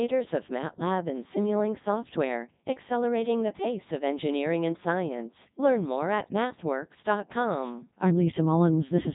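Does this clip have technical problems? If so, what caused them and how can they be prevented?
Yes. Throughout the speech there is Codec 2 vocoder damage, and it is heavy. The voice has a robotic, buzzy timbre with nothing above 3.8 kHz, which fits Codec 2's top mode of about 3.2 kbit/s. Unlike a band-limited or lossy-compressed waveform, the original waveform is gone. The decoder rebuilt it from sine waves using only pitch, voicing, energy and a spectral envelope. Prevent it by using a waveform codec such as Opus at a higher bitrate wherever the channel allows.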